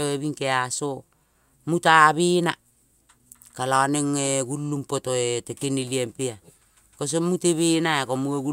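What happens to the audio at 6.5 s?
Nothing goes wrong at 6.5 s: the speech carries on intact through that moment, with no dropout, glitch or distortion to be heard.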